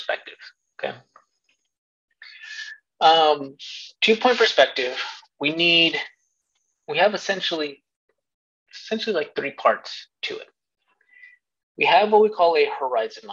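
Nothing here stands out as a technical fault, so there's nothing to flag in this one.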